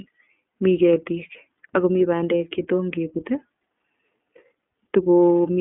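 From start to finish the speech runs through the iLBC codec, a narrowband coder. Nothing sits below about 200 Hz or above 3.5 kHz, and the plainly audible roughness, a slightly synthetic, buzzy grain, fits its 13.33 kbps mode with 30 ms frames. Because each frame's excitation is coded independently, the coarseness stays even and frame-bound instead of swirling. That separates it from a plain telephone band-limit, which muffles without this grit.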